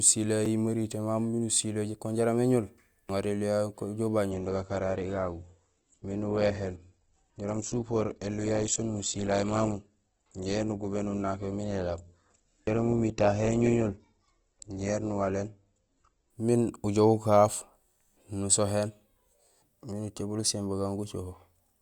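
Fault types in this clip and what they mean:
Block of digital silence: at about 0.45 s, a roughly 5 ms run of samples drops to silence and back with no fade, heard as a brief tick. The waveform shows a short flat line at zero; a spectrogram shows a thin blank column edged by click streaks.
Adaptive stream at a lower bitrate: from 4.31 s to 16.31 s, the speech abruptly turns duller, with no gap, consistent with a drop from Opus at 64 to 12 kbit/s. A spectrogram shows a hard ceiling at 8.1 kHz across that span.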